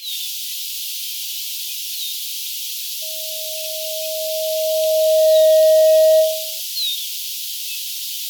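At 3.02 s a loudspeaker feedback squeal kicks in: a single tone near 631 Hz swells over roughly two seconds until it sits about 15 dB above the sound, then stops at 6.61 s. The mic was hearing its own speaker and the loop ran away.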